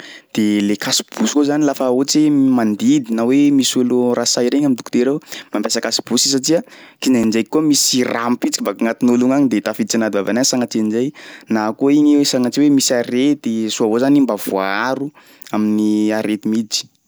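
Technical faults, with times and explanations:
7.23 s, block of digital silence: 5.8 ms of silence, fitting an unfilled 256-sample buffer; the abrupt edges make a tick or dip, seen as a flat waveform notch with vertical spectrogram streaks.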